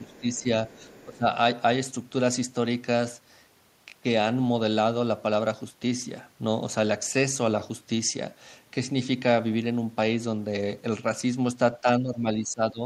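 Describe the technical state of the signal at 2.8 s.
At 2.8 s the speech signal is intact, with no fault audible at that moment.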